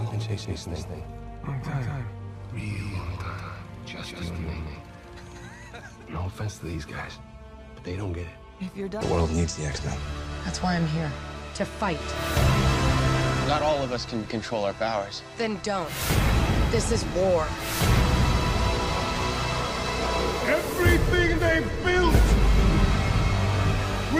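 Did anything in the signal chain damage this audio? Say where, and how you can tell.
Yes. From the very start of the clip to 5.48 s there is a doubled audio track: a second, full-band copy of the sound runs roughly 200 ms behind the original at about 5 dB lower. It carries no decay or room colour, so it is not an acoustic echo, and it drops out abruptly at 5.48 s. The likely cause is at the driver or buffer stage, where the same signal was captured a second time through a slower path and mixed back in.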